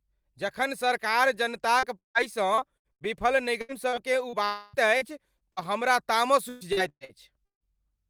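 At 1.79 s, just after "जखन सरकार", short concealed packet loss: about 40 ms never arrived in time, and the receiver's patch leaves a brief smear. From 1.99 to 2.18 s the sound continues as a fading buzz and then drops to about 140 ms of silence, and from 4.45 to 4.76 s it is held as a smeared continuation for nearly 0.3 s without going silent; both are likely a long network dropout. Repeated packet loss (robotic sound) follows from 2.55 to 3.08 s, 3.61 to 4.36 s, and 4.97 to 5.64 s before "हमरा तामस". Packets kept going missing, so the audio turns choppy, with pieces missing. The worst stretch is 6.49 to 7.68 s after "हमरा तामस", where 40% of the sound is patched and one gap lasts 157 ms.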